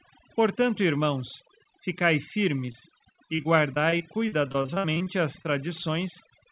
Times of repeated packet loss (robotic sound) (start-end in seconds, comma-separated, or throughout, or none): 2.66-5.47